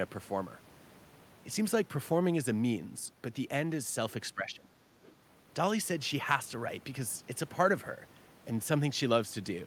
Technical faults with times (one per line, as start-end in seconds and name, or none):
4.35-4.71 speech suppressed in double talk
5.03-5.12 other side's voice leaking through